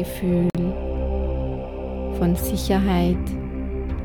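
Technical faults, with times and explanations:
0.50–0.55 s, Bluetooth stall: radio interference likely held up the wireless packets, so the headphones' buffer emptied before the resent data arrived and playback had nothing to play. The sound cuts abruptly to silence for 47 ms, then resumes.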